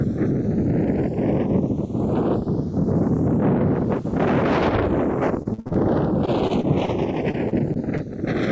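The audio carries a slow flanging sweep from start to finish, caused by channels drifting apart. The two channels appear to come from devices on independent clocks, with a mismatch of roughly 150 ppm, so the inter-channel delay creeps upward to around half a millisecond by the end. When the channels are summed to mono, the resulting comb-filter notches move steadily through the spectrum, which is heard as the gradual flanging. Three bursts of repeated packet loss produce a choppy, robotic texture. The first, from 5.43 to 5.78 s, is the most severe: five gaps, the longest 55 ms, with over half of that span filled by concealment that extends the preceding sound. The second, 6.26 to 6.89 s, and third, 7.31 to 8.01 s, each contain four shorter gaps of up to about 24 ms, with roughly a tenth of each span concealed. The absence of content above 8 kHz is consistent with a G.722 call path at 64 kbps.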